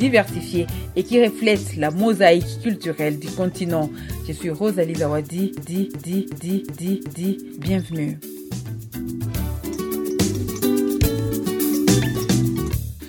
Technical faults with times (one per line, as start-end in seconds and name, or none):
5.57-7.43 system hang loop